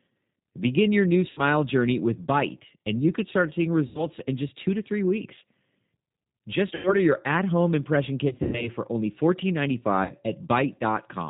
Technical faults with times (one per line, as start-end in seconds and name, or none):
0.00-11.29 G.729 codec
1.31-1.41 VoIP packet loss concealed by the speech codec
3.87-4.07 VoIP packet loss concealed by the speech codec
6.75-6.96 VoIP packet loss concealed by the speech codec
8.29-8.69 VoIP packet loss concealed by the speech codec
10.05-10.11 VoIP packet loss concealed by the speech codec